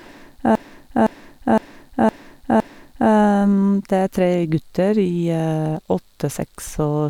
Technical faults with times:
0.55-3.11 repeated frames

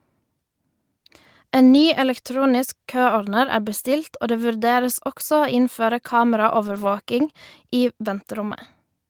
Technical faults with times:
1.73-1.83 lost packet rebuilt from error correction
6.67-6.85 lost packet rebuilt from error correction

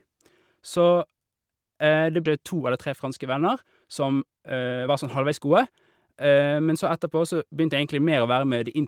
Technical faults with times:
2.25-2.27 skip ahead
2.41-6.75 jitter buffer speed-up

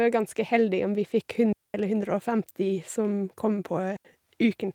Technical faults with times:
1.53-1.74 digital wireless dropout
3.97-4.05 digital wireless dropout

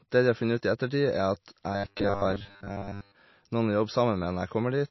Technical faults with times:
0.00-4.90 MP3 compression
1.73-3.15 robotic sound from repeated short buffers

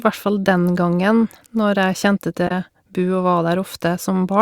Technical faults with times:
2.47-2.51 damaged data in a compressed stream

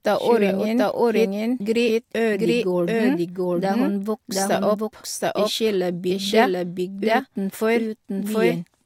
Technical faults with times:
0.00-8.86 doubled audio track

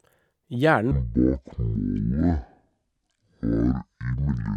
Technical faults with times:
0.91-4.57 section at the wrong speed

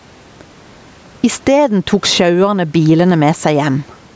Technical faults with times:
0.00-4.16 gain pumping

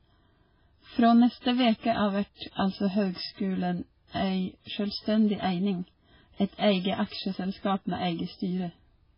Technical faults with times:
0.00-9.18 MP3 compression

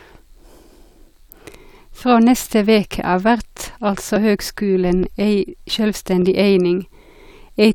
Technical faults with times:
5.03 dropped buffer (overrun)

